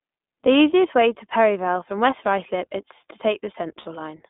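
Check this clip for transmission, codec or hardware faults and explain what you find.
Two faults are present. The whole clip is speech carried over a narrowband codec, and one short dropout occurs near the end.

iLBC codec, throughout. The band runs from about 200 Hz to 3.6 kHz. Each 20 ms frame's excitation is coded on its own. The damage is plainly audible: the voice sounds thin, slightly rough and synthetic. The sound fits iLBC's 20 ms mode near 15 kbps.

Lost iLBC frames, from 3.80 to 3.88 s. About 60 ms of audio is missing, which fits three lost 20 ms frames. The decoder repeats the last pitch cycle with added noise. This gives a brief held, buzzy vowel, and the voice returns right after.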